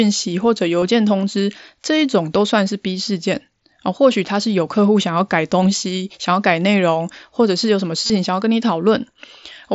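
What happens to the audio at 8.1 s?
A brief buzzy, tonal hold at full level, from 8.06 to 8.10 s, ending with a slight warble as the real sound resumes: concealed Bluetooth headset packet loss. About 38 ms of audio was lost between headset and phone over the mSBC link, which fits a run of several consecutive lost packets. Rather than going silent, the receiver filled the gap by repeating the best-matching slice of the last 20 ms or so, so one short cycle loops into that buzz.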